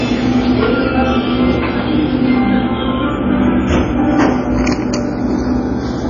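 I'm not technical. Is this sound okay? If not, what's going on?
No. Two faults run through the whole clip.

Channels drifting apart: the left and right sides were captured on devices with slightly mismatched clocks, roughly 30 parts per million apart. The gap between them grows to about a fifth of a millisecond by the end, so mixed to mono the sound takes on a slow, sweeping, whooshing flanging effect.

The audio also sounds dull and muffled, with nothing at all above 7.1 kHz. This is likely low-bitrate audio saved at a high bitrate: a heavily squeezed MP3 was later re-saved as a large, high-quality MP3. The larger file cannot restore the detail that was thrown away the first time.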